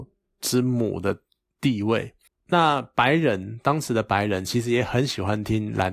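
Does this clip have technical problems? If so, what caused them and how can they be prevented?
No, this clip has no technical problems, so there is no cause to identify and nothing to prevent.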